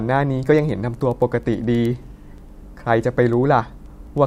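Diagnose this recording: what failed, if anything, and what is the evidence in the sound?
The fault is at the converter stage: word clock ticks from an unlocked digital link. Regular ticks run through the speech from 0.16 s to 4.18 s, roughly ten per second. Each marks one slipped sample, which fits a clock mismatch of around 200 ppm.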